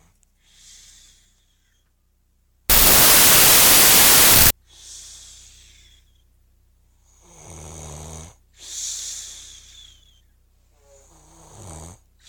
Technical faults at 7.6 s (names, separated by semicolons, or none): none